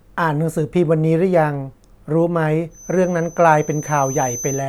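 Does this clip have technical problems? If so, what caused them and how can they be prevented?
Yes. A feedback whistle runs from 2.69 s to the end of the speech clip at about 4.69 s: a thin, steady tone near 6.1 kHz sits well below the speech and swells and fades slowly in level. The likely cause is a loudspeaker-to-microphone loop balanced right at the edge of feedback, so this one frequency keeps ringing without building up. Lowering monitor gain, moving or aiming the loudspeaker away from the microphone, or notching out 6.1 kHz would prevent it.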